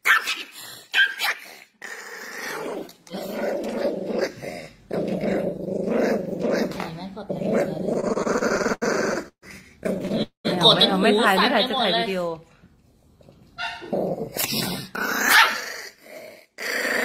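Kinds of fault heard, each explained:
Repeated stalls (stutter): the jitter buffer keeps running dry, so the sound drags and hiccups, with 17 fills from 7.93 to 9.44 s and four more near 10 s.
Call audio freeze: at 10.22 s the sound holds, fades, then drops to silence for 120 ms, 220 ms in all, likely from delayed packets, before resuming where it stopped.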